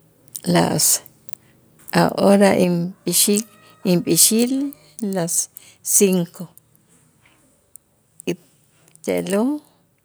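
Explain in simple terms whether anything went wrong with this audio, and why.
At 2.64 seconds, the speech and the background behind it suddenly become a little quieter in a single step. This is a microphone volume stepped down: the call software likely judged the microphone too loud and turned its input level down at once.

From 4.21 to 4.24 seconds, the loudest moment of the speech takes on a brief harsh, crackly edge. This is microphone overload. The input was likely set too high, so the peaks hit the recording limit and their tops were cut off.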